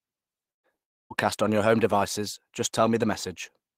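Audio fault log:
0.51–0.66 s, burst of packet loss: about 120 ms of audio never made it, so the last sound gets stretched and faded before playback jumps ahead.
0.83–1.13 s, long network dropout, likely: about 0.28 s is missing, the held sound dies away into near silence, and the audio picks up further on.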